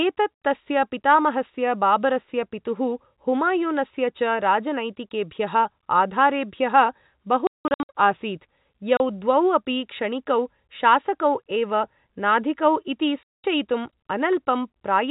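At 7.47 to 7.89 s, 8.97 to 9.00 s and 13.23 to 13.44 s the speech drops out with hard edges: packet loss filled with silence. The gaps come in 30 ms steps, which fits 30 ms packets. On the waveform they show as flat silent stretches, and on the spectrogram as blank vertical bands, all under the 4 kHz ceiling of the G.711 telephone band.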